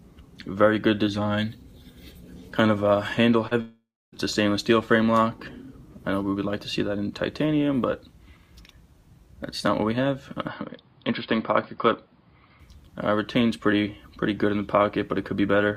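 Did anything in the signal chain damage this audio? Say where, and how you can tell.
Yes. Network stage: short concealed packet loss at 3.47 to 3.53 s, about 40 ms missing, bridged by a smeared continuation of the preceding sound.

Network again: from 3.61 to 4.14 s the sound continues as a fading buzz or hiss, then about 0.28 s of silence, likely a long network dropout losing roughly half a second.

Capture stage: between 10.48 and 12.60 s the band stops near 5 kHz and the sound turns dull, likely an input switched to a poorer device, same level, with low added noise.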